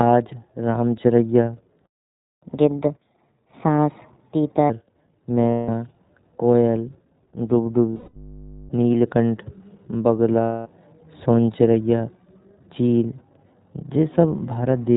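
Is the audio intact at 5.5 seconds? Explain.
No. From 5.50 to 5.69 s, about 180 ms, iLBC frames were lost. The decoder repeats the last pitch cycle with noise, so it sounds like a held, buzzy vowel. The whole passage also carries the iLBC codec. It cuts everything above 4 kHz, and the sound is plainly rough and synthetic, which fits 20 ms frames at 15.2 kbps.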